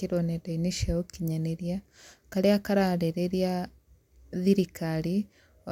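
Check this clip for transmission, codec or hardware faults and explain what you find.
No transmission, codec or hardware faults.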